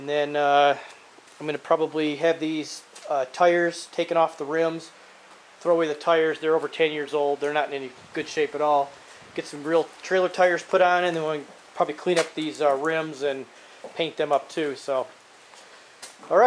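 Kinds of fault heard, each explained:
No technical faults of any kind can be heard anywhere in the signal.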